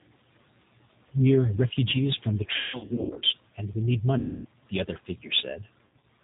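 Right from the start everything has the rough, slightly synthetic G.729 codec character, with nothing above 4 kHz, which fits an 8 kbit/s VoIP link. Then comes VoIP packet loss concealed by the speech codec. From 2.56 to 3.24 s, after "refugees from the", about 450 ms drops out in bursts, the longest 180 ms. The decoder stretches the last sound into a fading buzzy tone or coloured noise until "and we need". It happens again from 4.18 to 4.48 s, roughly 270 ms lost before "the other", and once more from 5.85 to 6.04 s.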